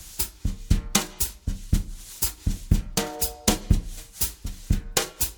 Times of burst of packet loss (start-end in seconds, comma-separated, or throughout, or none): none